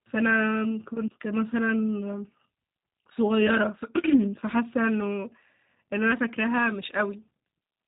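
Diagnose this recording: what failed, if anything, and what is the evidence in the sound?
The codec stage failed: the speech has passed through a G.729 codec, and the damage is plainly audible for the whole clip. The bandwidth stops hard at about 3.8 kHz, and voiced sounds have a rough, slightly synthetic buzz, which fits an 8 kbit/s G.729-type coder. The codec models each frame with a vocal-tract filter, a pitch predictor and a few pulses. On a spectrogram, everything above 3.8 kHz is empty and the harmonics look smeared.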